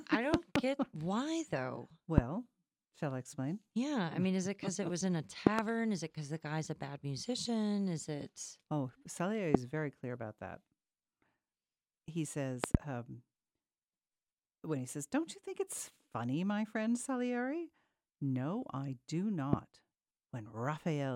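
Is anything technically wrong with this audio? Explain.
Yes, there are six loud pops sitting well above the speech, roughly 25 dB hotter, at 0.34–0.58, 2.18–2.20, 5.47–5.61, 9.55–9.57, 12.64–12.77 and 19.53–19.56 s. The first, third and fifth are double pops. These are likely voltage spikes from a switch, static or a driver glitch, and the speech carries on underneath each one.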